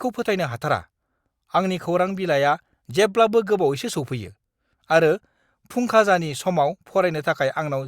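A speech recording with no technical faults to report. Nothing in it calls for a time or a cause.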